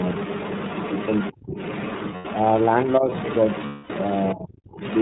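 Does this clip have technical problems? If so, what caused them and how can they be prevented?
Yes, there are four kinds of fault.

iLBC codec: the whole clip has a narrowband, slightly rough, synthetic quality. Nothing gets through above 4 kHz, and the grain fits the 13.3 kbps mode with 30 ms frames. To avoid it, negotiate a wideband codec such as Opus when both ends support it.

Other side's voice leaking through: a second voice sits about 10 dB under the talker from 0 to 1.34 s and again from 1.55 to 4.35 s. It's back at about 15 dB down from 4.68 s to the end. The likely cause is loudspeaker sound the echo canceller didn't fully remove. Using a headset, or giving the canceller a properly aligned reference signal, would prevent it.

Speech suppressed in double talk: the talker dips hard at 1.35 to 1.57 s, by around 35 dB, and again at 4.35 to 4.55 s, by around 25 dB. There's a lighter dip of about 10 dB at 3.00 to 3.08 s. 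Each one likely happened because the canceller turned everything down while both sides spoke. A canceller with better double-talk detection, or a headset, prevents this.

Lost iLBC frames: at 2.15 to 2.26 s (90 ms) and 3.66 to 3.91 s (240 ms), the sound becomes a held, buzzy vowel while the decoder repeats the last pitch cycle. The longer gap fades out, and the voice recovers almost immediately after each one. A jitter buffer, FEC or a more stable network path would cut these losses.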